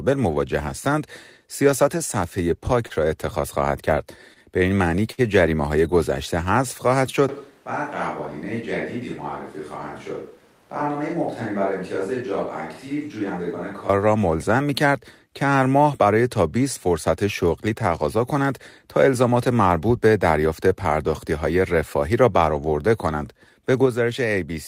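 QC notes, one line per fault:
2.87–2.93 s, 4.34–4.39 s, 5.12–5.21 s: short stall from a late packet. Each time, a packet arrived after its slot and the playout buffer emptied. The receiver held the last sound in place to bridge the wait, for 26 ms, 20 ms and then 58 ms. Playback then resumed exactly where it left off, so no speech is lost. The held sound drags slightly and carries a faint buzz or dip. The third stall is the longest. Each stall pushes playback later by the length of its fill.
7.29–13.89 s: switch to a distant microphone. The close pickup drops out at once and is replaced by one set further from the talker. This is likely a failed or excluded close channel. The speech turns hollow and roomy and loses its low end. It falls by about 10 dB. Background noise rises to roughly 30 dB below the speech. The change in and the change back at 13.89 s are both abrupt, with no crossfade.
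10.86–12.23 s: jitter buffer speed-up. The buffer had built up more audio than its target, as happens when delayed packets arrive in a bunch. To pull latency back down, the receiver cut out many tiny pitch-period slices in quick succession. About 50 ms is removed in total. The speech plays at 103% speed with its pitch unchanged. This stretch falls inside the distant-microphone section.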